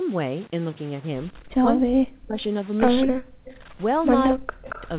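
Low bit depth without dither runs through the whole clip. The speech sounds as though it was likely truncated to about 6 bits with no dither, leaving grainy distortion around 20 dB below the speech. The distortion tracks the speech, so quieter syllables turn gritty.

Speech suppressed in double talk appears from 1.5 to 2.36 s, from 3.06 to 3.53 s and from 4.33 to 4.72 s. The echo canceller likely could not separate the talker from loudspeaker echo while both sides spoke, so it pulled the voice down by as much as around 40 dB. The voice dips and drops out in pieces.

Echo leak appears from 3.01 to 3.06 s, from 3.45 to 3.57 s and from 4.69 to 4.89 s. It is a delayed copy of the voice, 227 ms late, likely from a loudspeaker whose canceller let residue through. The copy sits about 25 dB down in the first two scraps and about 15 dB down in the last. All of this is heard through the call's G.711 path, which keeps the sound below 4 kHz.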